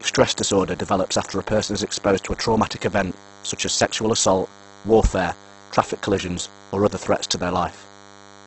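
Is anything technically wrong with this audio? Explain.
Yes, two faults run through the whole speech clip.

DECT cordless phone buzz, throughout: a nearby DECT handset or base sends a radio burst every 10 ms, and the audio circuit rectifies it into sound. The result is a thin, steady 100 Hz buzz with a comb of harmonics, sitting roughly 25 dB below the speech.

Opus compression, throughout: the speech turns rough and grainy, and nothing is heard above 8.2 kHz. This points to a heavily squeezed stream, likely Opus in its music mode at a low bitrate around 12 kbps, where starved bands get filled with folded or noise-like content.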